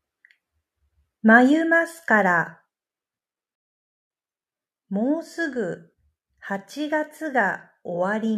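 A rebuffering stall runs from 3.55 to 4.10 s: playback exhausts its downloaded audio, falls silent for about 0.55 s, then resumes the speech exactly where it stopped.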